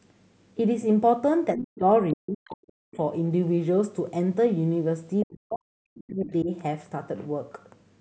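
At 1.55 s the talker's speech sinks sharply for about 0.3 s, to 1.84 s, falling by something like 40 dB at its deepest. This is speech suppressed in double talk. The likely cause is that the other party spoke at the same moment, and the echo canceller, unable to tell the near talker from loudspeaker echo, attenuated everything. The same collapse returns from 2.14 to 2.99 s and, longest, from 5.24 to 6.51 s, where the talker fades or breaks up rather than speaking continuously.

Overlapping the first dip, from 1.56 to 1.63 s, a brief fragment of the other side's voice leaking through can be heard, only around 10 dB under the talker. A much fainter scrap, roughly 35 dB down, slips through between 2.46 and 2.50 s. Both are likely residual loudspeaker echo that the canceller failed to remove from the microphone signal. They arrive as short fragments rather than sustained speech.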